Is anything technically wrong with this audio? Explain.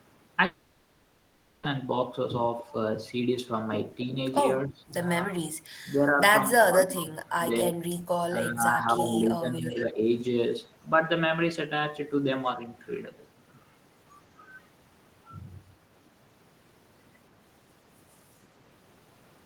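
Yes. The speech has three kinds of fault.

A long network dropout runs from 0.45 to 1.65 s. For about 1.2 s no new audio plays. The gap is never fully silent. The receiver stretches the last sound into a buzzy, fading fill across the whole gap. Speech then resumes with that stretch missing. The likely cause is packets lost or badly delayed in transit.

Speech suppressed in double talk appears four times: 4.39 to 4.76 s, 5.26 to 5.40 s, 5.95 to 7.80 s, and 8.30 to 10.07 s. The voice dips by around 10 dB in most spans. From 5.95 to 7.80 s it drops by around 20 dB. The likely cause is an echo canceller that heard both sides talking and turned everything down.

An echo leak occurs at 9.69 to 9.91 s. A copy of the voice returns 144 ms late, roughly 15 dB below the speech. A much fainter one follows at 18.11 to 18.16 s, around 40 dB down. The likely cause is a loudspeaker on one side whose echo canceller failed to remove all of its own output that the microphone picked up.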